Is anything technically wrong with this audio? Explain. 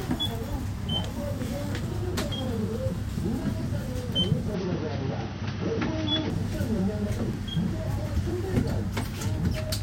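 Yes. From 4.54 to 6.30 s the sound turns dull and boxy, with nothing above 6.1 kHz, then clears again. The likely cause is the input being switched to a poorer device with a narrower band and its own faint background noise. That faint noise, about 50 dB down, with no gap and no level jump, separates it from a plain low-pass filter.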